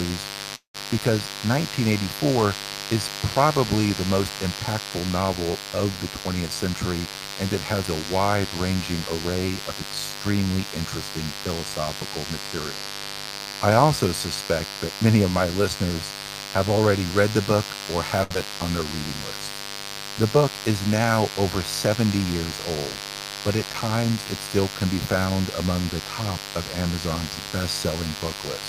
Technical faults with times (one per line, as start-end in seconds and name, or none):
0.00-28.68 mains buzz
0.55-0.77 call audio freeze
6.48-8.03 jitter buffer speed-up
18.23-18.33 short stall from a late packet
18.34-18.38 short concealed packet loss
18.45-18.85 jitter buffer slow-down